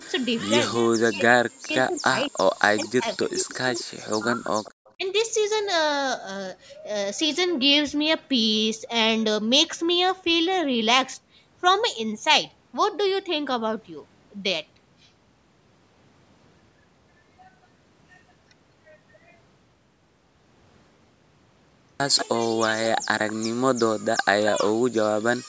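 From 0.09 to 0.39 s a faint delayed copy of the speech trails it by about 212 ms, roughly 25 dB down. This is echo leak, likely from a far-end loudspeaker whose echo canceller let part of its microphone pickup return down the line. Then the talker's speech drops sharply, by as much as about 40 dB, in patches between 0.69 and 1.73 s, 1.89 and 2.34 s, and 2.77 and 4.49 s, with a shallower dip of about 15 dB at 4.97 to 5.04 s. This is speech suppressed in double talk, likely an echo canceller mistaking overlapping talk for echo and attenuating both. Echo leak returns at 4.64 to 4.93 s and in brief scraps at 22.17 to 22.26 s and 23.28 to 23.33 s, each about 192 ms late. The 22.17 s scrap is strongest, at about 10 dB below the speech, and the others sit at about 20 to 25 dB down.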